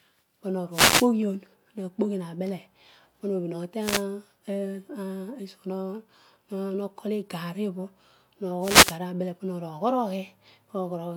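Three wireless microphone noise hits, at 0.71 to 1.09 s, 3.79 to 4.05 s and 8.60 to 8.98 s, come through as brief swishes of static as the FM radio link fades and receiver hiss swells over the speech. Noise rising, rather than sound dropping to silence, separates these from digital dropouts.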